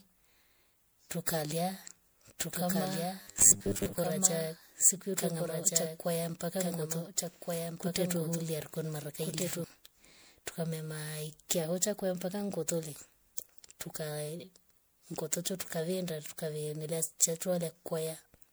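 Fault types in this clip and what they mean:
Generation loss: The whole clip sounds swirly, smeared and hollow, with blurred attacks, beyond what a single 128 kbit/s MP3 encode would produce. The likely cause is decoding and re-encoding around four times, each pass adding fresh quantisation noise and spectral holes on a shifted frame grid.
Doubled audio track: From 2.52 to 9.64 s, a full-band second copy of the sound runs roughly 1.5 s behind the original, about 5 dB quieter, dry and without room colour. It starts and stops abruptly. The likely cause is a slower parallel capture path or misaligned edit.
Robotic sound from repeated short buffers: Between 3.22 and 3.98 s the sound becomes a rigid metallic buzz at 100 Hz that still loosely tracks the speech. That pitch fits a 10 ms chunk being repeated, and most of that stretch is repeats, the likely cause being late-arriving buffers.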